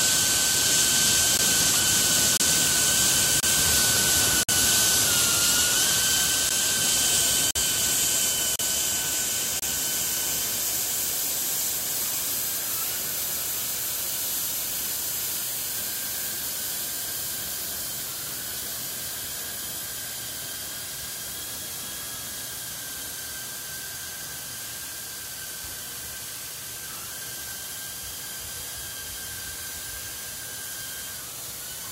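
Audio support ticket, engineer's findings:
Gap between stream segments at 1.37, 2.37, 3.40, 4.43, 6.49, 7.51, 8.56, 9.60 s: hard-edged silent holes of 13 to 55 ms, about 1 s apart, consistent with 1-second segments. Segment timestamps misaligned; player pads with silence.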